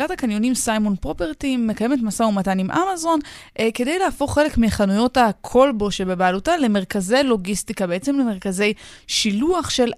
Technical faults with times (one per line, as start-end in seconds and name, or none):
0.61 corrupt FLAC frame